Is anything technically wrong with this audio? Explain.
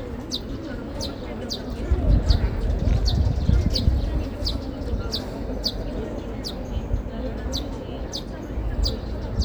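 No, nothing is technically wrong with this audio.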